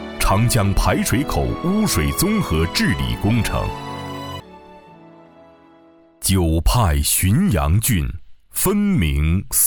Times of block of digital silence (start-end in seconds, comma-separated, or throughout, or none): none